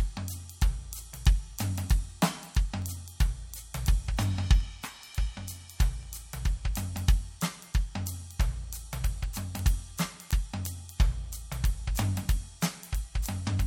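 From 0.33 s to 13.51 s, sharp ticks recur about every 0.4 s. These are word clock ticks: an unlocked receiver's clock drifts and slips one sample each cycle.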